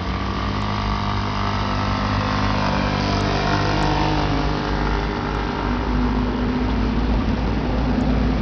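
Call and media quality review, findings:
Throughout the clip: dull, gritty sound, treble missing or flickering in and out, grainy noise and aliasing riding on it. Likely Bluetooth SBC compression at a starved bit pool, which fits roughly 64 kbps. Top sub-bands get few or no bits; remaining bands coarsely quantised. Spectrogram: upper bands blank or blinking in blocky patches, hard-edged band steps, speckled noise floor. Waveform: rough, fuzzy envelope.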